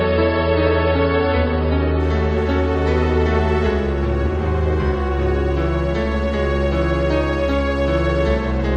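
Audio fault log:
0.0–2.0 s: adaptive stream starting at a low bitrate. The player opened on a low-quality version to begin quickly, so nothing above 5.1 kHz is heard and codec artefacts are stronger. At 2.0 s, once it had measured the connection, quality jumps up with no gap, which fits AAC rising from about 16 to 96 kbit/s.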